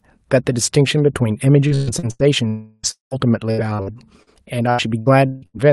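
From 1.67 to 2.22 s the speech turns choppy and robotic. This is repeated packet loss: four gaps, the longest 123 ms, each patched by stretching the last sound. About half of the stretch is concealed.

From 2.47 to 2.86 s about 360 ms of audio goes missing. It is replaced by a continued buzz that does not fade to silence. The sound likely comes from a long network dropout.

From 2.91 to 3.14 s a 200 ms hole follows. The concealing buzz dies away, and about 140 ms of silence remains before the audio returns.

Repeated packet loss returns from 3.51 to 4.30 s. Four gaps, the longest 71 ms, cover about a quarter of the span, so the choppiness is lighter here. From 4.71 to 5.57 s four more gaps follow, the longest 158 ms. Nearly half the span is patched.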